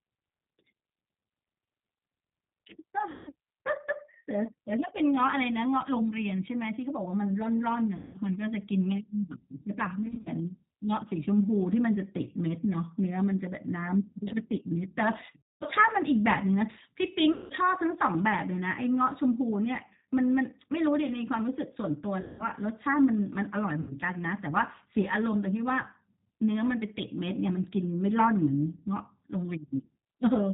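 Throughout, the G.729 codec at 8 kbit/s gives the speech a slightly rough, synthetic edge. Its low-rate pulse modelling is plainly audible. On a spectrogram nothing appears above 4 kHz, and the harmonics look smeared and coarse rather than cleanly striated.

VoIP packet loss concealed by the speech codec occurs at 3.1–3.33 s, 7.97–8.21 s, 10.06–10.29 s, 15.4–15.64 s, 17.33–17.53 s, 22.2–22.45 s and 23.8–23.96 s. Each time, roughly 90 to 220 ms of audio goes missing. At 10.06 s the gaps are scattered over 200 ms, the longest being 50 ms. The decoder fills each gap by repeating its last pitch and filter at falling gain, so a buzzy tone or coloured noise that fades replaces the speech, followed by weak recovery. On a spectrogram this shows as flat, repeated bands. The waveform shows a decaying envelope.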